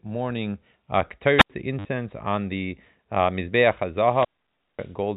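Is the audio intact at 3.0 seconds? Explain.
Yes, the speech at 3.0 seconds is intact, carried through G.711 telephone coding with its band limit of 4 kHz and only faint quantisation noise riding on the signal.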